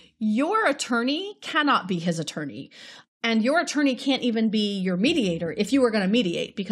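No technical faults occur at any point in this speech clip.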